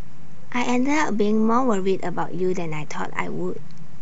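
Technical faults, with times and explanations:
Throughout: DC offset of about -22 dBFS shifts the whole waveform off zero, inaudible itself but eating headroom and leaving steady energy at 0 Hz.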